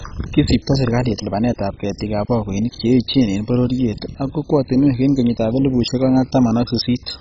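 From start to end the speech sounds dull, gurgling and granular, the signature of heavy MP2 compression, likely at a very low bitrate near 16 kbps. Starved of bits, the upper sub-bands switch off: the spectrogram shows nothing above 7.5 kHz, with blocky bands flickering beneath.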